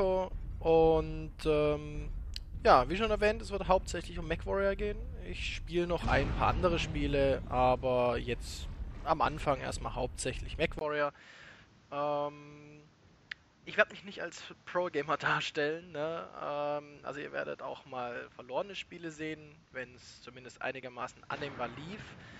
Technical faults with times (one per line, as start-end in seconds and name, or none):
10.79-22.39 input switched to a poorer device